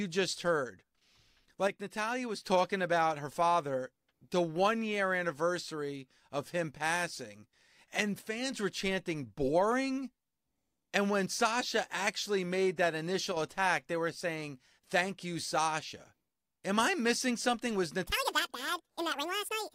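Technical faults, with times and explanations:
1.67 to 2.46 s, 8.19 to 8.52 s and 13.32 s: one channel drops out. The speech level falls abruptly by about 6 dB three times, the last lasting only about 50 ms, then recovers. The first ends just before "about her father the", the second sits between "of him passing and" and "were chanting boring", and the third falls between "actually made that" and "attack they were saying". A 6 dB step is what a mono sum loses when one side of the stereo pair goes silent, so the likely cause is a brief loss of one channel.
18.06 s to the end: section at the wrong speed. The final stretch of speech runs at about 1.89 times its proper rate, so it sounds hurried and raised in pitch by roughly ten semitones, close to an octave. Pitch and tempo shift together, the signature of playback clocked too fast rather than pitch processing, which likely points to a resampling or clock mismatch on that segment.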